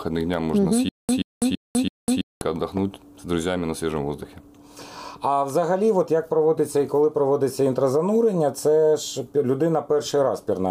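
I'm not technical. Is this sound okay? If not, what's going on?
No. Playback likely stalled and kept retrying, causing a stutter with silent gaps: from 0.89 to 2.41 s, one 0.13 s burst repeats four times between silences.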